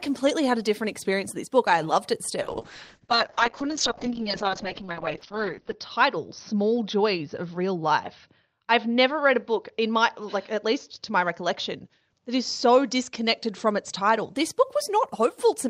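A call bitrate drop hits this speech recording from 2.43 s to 14.41 s: the encoder's bit budget was slashed, and the sound points to a fall from around 32 kbps to about 7 kbps. At that rate the codec narrows the audio band from 20 kHz to 6 kHz, so the speech turns muffled and rough, with a watery, coarse texture that is worst for about 3.3 s at the lowest rate before recovering.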